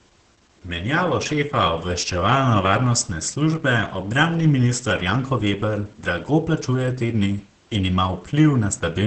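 The speech here has Opus voice compression running all the way through, and it's a heavy dose. Nothing comes through above about 8.7 kHz, so the top end is gone and the voice sounds muffled. It also picks up a hoarse, slightly robotic edge, because the SILK linear-prediction coder is describing the excitation only coarsely. That wideband cut-off and the amount of damage point to a low bitrate, something around 10 kbps.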